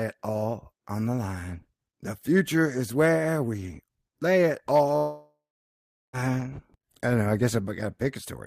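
From 4.97 to 6.15 s, a likely long network dropout smears the last sound into a fading buzz, then 0.76 s of silence; 1.16 s never returns.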